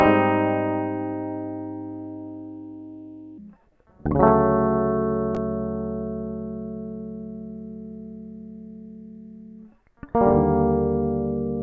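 From 3.38 s to the end, the music shows a wrong sample rate fault: playback runs at two-thirds speed, pitch drops about seven semitones, and everything turns slow and low. That ratio fits 24 kHz material played out at 16 kHz without conversion.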